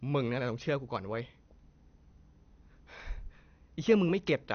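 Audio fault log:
Throughout, MP2 compression: the speech was likely squeezed through an MPEG Layer II encoder at a rate that points to roughly 48 kbps, too little to cover all 32 sub-bands. The encoder shuts off the upper bands entirely, leaving nothing above 6.5 kHz, and the bands it keeps are coarsely quantised. The voice sounds dull and muffled, with a plainly audible gurgling, granular roughness as bands flicker in and out.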